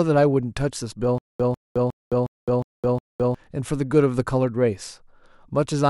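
From 1.18 to 3.35 s, a stutter with silent gaps: a 147 ms fragment repeats six times, showing as identical waveform blocks between 213 ms flat-line gaps, likely from a stalled stream.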